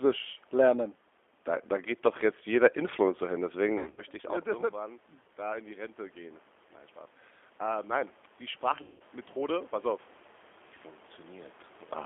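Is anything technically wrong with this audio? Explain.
Yes, there are two faults. The whole clip has gone through a G.729 codec, and packet loss breaks it up twice.

The G.729 coding runs the full length. The band sits between roughly 300 Hz and 3.5 kHz, so nothing bright survives on top. The damage is plainly audible: the speech has that rough, slightly synthetic edge you get when it's rebuilt from a vocal-tract filter, a pitch predictor and a few pulses per frame. That fits an 8 kbit/s G.729A link. The room noise picks up some warble too.

There's VoIP packet loss concealed by the speech codec from 3.78 to 4.03 s, just before "ich auch". About 160 ms is missing, scattered over 200 ms, and the longest gap is 80 ms. The decoder fills each hole by stretching its last pitch and filter while turning the gain down, so the speech turns into a buzzy tone or coloured noise that fades. It then takes a moment to recover. 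The talker also shifts level around 4.0 s, but that's just movement, not the line.

The second loss runs from 8.82 to 9.02 s and is denser, with about 180 ms gone. That amount points to roughly nine dropped 20 ms packets. It has the same character: a stretched buzzy tone or coloured noise that decays rather than clean silence. It sounds weak or distorted for a bit afterwards because each concealed frame builds on the previous bad one.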